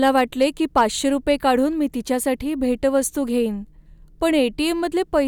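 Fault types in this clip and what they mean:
Hard clipping: from 0.03 to 0.82 s the speech drives a stage about 3 dB past its limit, so the loudest peaks are sliced flat. Those squared-off tops add high harmonics, heard as a brittle crackle on the strongest moments.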